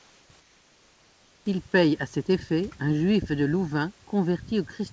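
The sender likely stopped transmitting during pauses, under discontinuous transmission, leaving the receiver to synthesise comfort noise in place of the background. From 0.0 to 0.30 s, and again from 0.40 to 1.46 s, the real room noise, which sits roughly 35 dB below the loudest sound, gives way to a smooth, detail-free hiss about 3 dB quieter. The texture changes audibly at each boundary. The call path's band limit, with nothing above 8 kHz, fits a G.722 wideband link.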